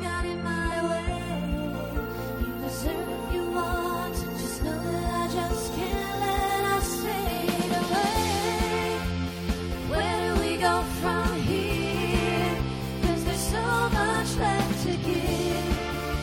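Damaged data in a compressed stream shows up as brief chirps or blips at 0.71 s, 3.59 s, 5.89 s and 10.00 s, and once more from 15.76 to 15.78 s. Each lasts only a few tens of milliseconds at most. At these points the encoded bytes are corrupted, so the decoder misreads or rejects the affected frames, loses sync and hunts for the next valid frame header. The result is a short glitch that cuts across the surrounding sound.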